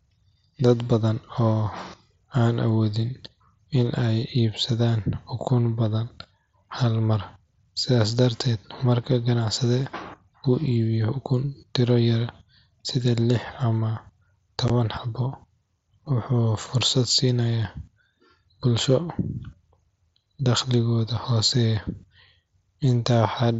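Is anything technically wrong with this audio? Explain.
Yes. At 14.68 s there is unconcealed Bluetooth headset packet loss: a hole of about 15 ms, fitting two dropped headset packets, filled with silence or an idle pattern. Its abrupt edges, not a smeared or repeated fill, show no concealment ran. The wideband mSBC headset codec adds light graininess.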